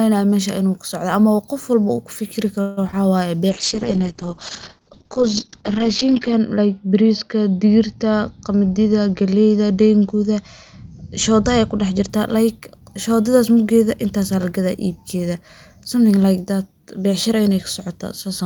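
Speech, carrying four faults typical of a voice call. Just after "qof walbo uu kufikiri", from 2.61 to 2.79 s, there is a call audio freeze. The last sound is stretched into a fading buzz or hiss for about 156 ms. Nothing is lost, and the speech resumes where it stopped. The likely cause is late packets draining the jitter buffer. That pause adds about 156 ms of delay to everything after it. From 2.91 to 2.95 s comes a short concealed packet loss. About 20 ms of real audio never arrived in time. The receiver patched the hole by extending the previous sound for about 15 ms, then crossfaded back. The result is a tiny smear, and a brief consonant there may be missing. From 3.51 to 12.15 s there is a call bitrate drop. The encoder falls from 40 kbps to 8 kbps and stays at the bottom for about 2.8 s. The audio bandwidth shrinks from 20 kHz to 8 kHz, so the speech turns muffled, rough and watery. 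Fine detail and sibilance lose their crispness until the rate climbs back. From 8.49 to 9.79 s, inside that low-bitrate stretch, a jitter buffer speed-up occurs. The buffer had grown beyond its target, so the receiver trimmed many small pitch-period slices in a row. Roughly 150 ms is removed. Speech runs at about 112 percent speed with unchanged pitch, and sounds briefly hurried.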